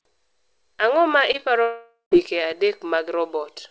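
At 1.32 and 1.37 s there's short concealed packet loss: two quick gaps of about 20 ms each got papered over, leaving brief smears in the speech. From 1.62 to 2.13 s the sound stretches into a fading buzz or hiss, then goes silent, most likely a long network dropout, before speech resumes past the lost half-second, all band-limited below 8 kHz.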